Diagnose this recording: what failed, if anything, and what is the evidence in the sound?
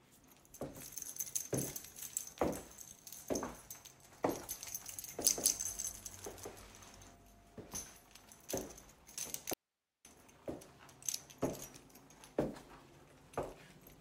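A doubled audio track runs from 5.30 to 7.16 s: every sound repeats at equal level about 200 ms later, with abrupt onset and end. It was likely an editing or second-capture-path error. The spectrogram shows full-band events duplicated side by side.

An audio dropout to a faint residue occurs from 9.54 to 10.05 s, lasting 0.51 s. The sound cuts abruptly to hiss about 50 dB down, which points to a likely upstream wiring or converter-input loss. The waveform collapses to a flat noise floor.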